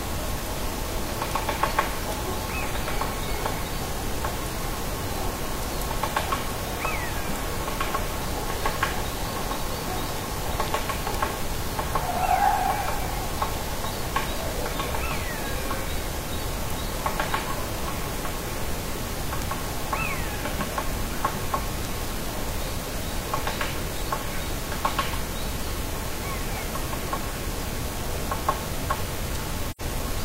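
Near the end, from 29.71 to 29.81 s, the sound drops out in an AAC frame loss with muting. Compressed frames went missing, and the decoder filled them with silence instead of guessing at the content. The gap lasts about 85 ms, which fits two lost frames. The overlapping transform windows soften both edges. So the audio fades down into a short hole, then fades back up.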